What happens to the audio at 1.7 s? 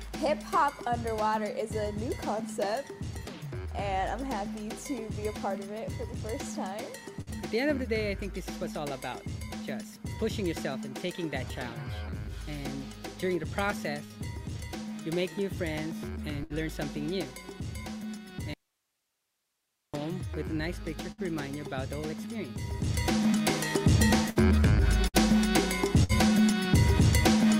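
Nothing goes wrong at 1.7 s; the audio runs through that moment intact, with no dropout, click or distortion.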